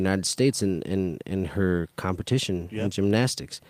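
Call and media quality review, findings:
Nothing stood out on listening to the speech in this recording.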